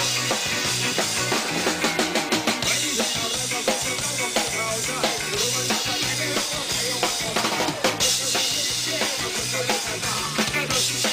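No technical faults can be heard in this recording.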